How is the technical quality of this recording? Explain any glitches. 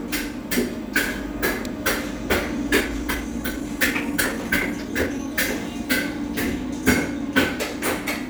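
The recording has one clear glitch, a time-stretched section from 2.76 to 5.28 s. Software likely squeezed this stretch to fit a shorter length, playing it about 1.35 times faster while holding the pitch by discarding short slices of the waveform and splicing the remainder together. The pace jumps abruptly at 2.76 s with no change in pitch, and the removed slices leave the audio sounding rushed until normal speed returns at 5.28 s.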